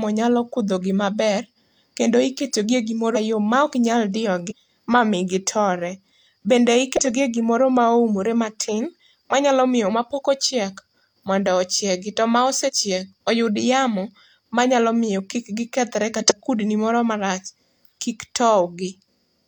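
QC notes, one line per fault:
3.12 to 16.32 s, compressed frames skipped: the speech jumps forward five times, at 3.12 to 3.17 s (after "maber kendo iketogi e", before "maok nyal"), 4.46 to 4.53 s, 6.97 to 7.07 s (before "e gimoro ma oumore"), 12.64 to 12.70 s, and 16.16 to 16.32 s (between "manyalo miyo kik gikethre" and "kudni moro marach"). Around 200 ms of audio is lost at 3.12 s, around 150 ms at 4.46 s, and around 50 ms at each of the others. Whole compressed frames were missing or rejected by the decoder as damaged, so the audio jumps ahead by the length of the frames left out.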